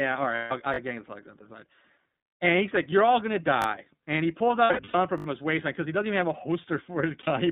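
This speech clip has a narrow, slightly rough and synthetic quality throughout, with no low bass and nothing above about 3.7 kHz, the band sitting roughly between 150 Hz and 3.7 kHz. That is the sound of the iLBC codec, a narrowband VoIP codec that codes each frame's excitation independently. The slight roughness fits its 13.33 kbps mode with 30 ms frames, and the coding damage is plainly audible. Three times the sound turns briefly into a held, faintly buzzy vowel: 0.35 to 0.52 s (150 ms), 4.64 to 4.95 s between "he pulls" and "from his waistline because" (about 210 ms of gaps scattered over 300 ms, the longest run about a tenth of a second), and 7.21 to 7.28 s (60 ms). These are lost iLBC frames. The decoder fills each gap by repeating the last pitch cycle mixed with noise, and because every frame stands alone, the speech snaps back to normal right after. Short stutters with hard joins occur at 0.74 to 0.78 s, at 3.62 to 3.66 s just after "all gonna", and at 5.18 to 5.26 s just before "his waistline because he". 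In the first two the same small piece plays three times, and in the last it plays five times. This is a repeated buffer: fresh audio arrived late, so the device replayed its last chunk, which fits a 20 ms buffer. Nothing appears to be skipped afterwards, so the repeats only delay the audio.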